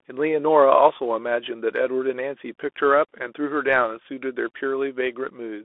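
From start to finish, the speech carries the Bluetooth CVSD headset codec. Everything sits between 300 Hz and 3.5 kHz, so it sounds thin and boxed in. Each sample is one up-or-down bit with an adapting step, which fits a 64 kbps link. The resulting granular roughness is plainly audible.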